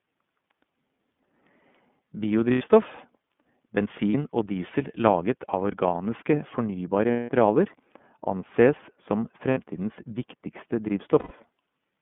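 Throughout, the speech passes through the iLBC codec. The line band of about 150 Hz to 3.5 kHz removes everything above, and per-frame excitation coding, consistent with the 13.33 kbps mode and 30 ms frames, leaves the sound plainly rough and synthetic.

Lost iLBC frames occur at 2.52–2.62 s (90 ms), 4.11–4.14 s (30 ms), 7.11–7.30 s (180 ms), 9.50–9.58 s (60 ms) and 11.19–11.32 s (120 ms). The decoder replays the last pitch cycle mixed with noise, giving a held, buzzy vowel that fades across the longest gap and recovers almost instantly afterwards.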